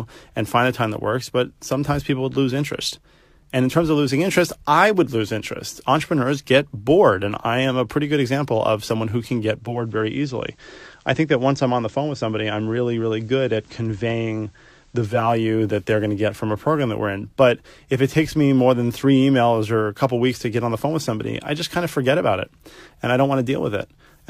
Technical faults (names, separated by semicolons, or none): digital radio blending to analogue